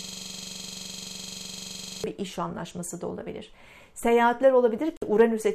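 A system hang loop is already under way when the audio begins and lasts until 2.04 s. The computer or driver stalled, and the sound hardware kept replaying the same stretch of its ring buffer. A 42.67 ms slice repeats exactly, roughly 47 times, so the sound becomes a steady mechanical buzz at about 23.4 Hz. That loop length fits a 2048-sample buffer.

A digital broadcast dropout runs from 4.97 to 5.02 s. The receiver lost the signal or rejected corrupted frames and muted until valid data came back. The sound drops to silence for about 48 ms, a gap that points to a couple of lost frames. It then resumes partway along, because the audio sent during the gap never arrived.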